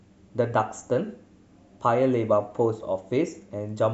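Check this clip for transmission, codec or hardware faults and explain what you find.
Nothing here to flag: the speech comes through steady and intact, with no transmission, codec or hardware trouble to report.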